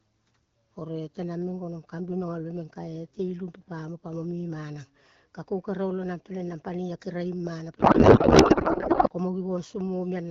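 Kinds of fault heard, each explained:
Codec payload misread: the receiver unpacked octet-aligned AMR frames as bandwidth-efficient, misplacing every field, so from 7.79 to 9.10 s speech becomes garbled noise and warble barely tracking it.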